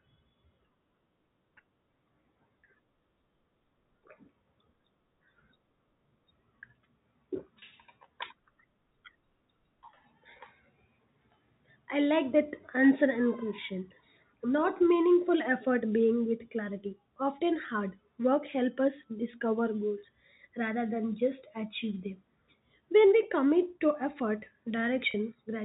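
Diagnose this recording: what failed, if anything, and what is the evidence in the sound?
Network packet loss with pitch repetition at 7.59–7.62 s and 25.11–25.14 s: the receiver repeats the last pitch period across each 30 ms gap, a brief buzzy hold.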